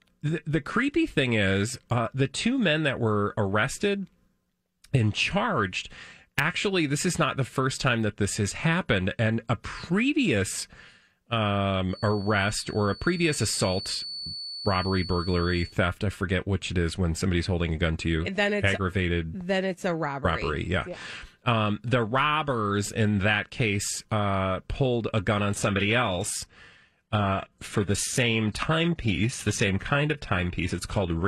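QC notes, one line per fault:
11.87–15.78 s, feedback whistle: a thin 4.5 kHz tone that slowly swells and fades, well below the speech, ending before "I forget which it"; likely a loudspeaker-to-microphone loop hovering at feedback.
25.42–31.28 s, adaptive stream at a lower bitrate: after "uh pulled a gun", treble vanishes above 12.3 kHz, consistent with a sudden switch to a low-bitrate HE-AAC stream.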